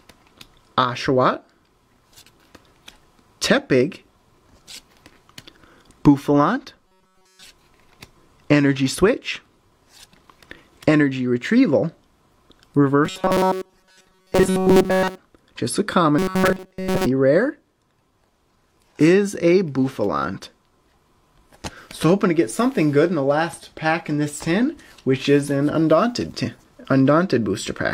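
Audio likely arriving too seldom, with roughly 5 ms snippets repeated to fill the gaps, gives robotic sound from repeated short buffers at 6.88–7.44, 13.05–15.18 (mostly repeated) and 16.19–17.06 s: a rigid metallic buzz at 188 Hz.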